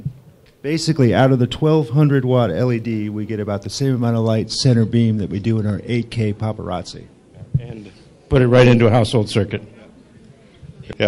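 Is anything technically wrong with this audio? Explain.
Yes. From 4.45 s to the end, the adaptive stream switches to a lower bitrate, consistent with MP3 falling from 128 to 48 kbit/s. Quality drops abruptly with no gap: nothing remains above 11.3 kHz, treble turns dull, and codec artefacts become audible.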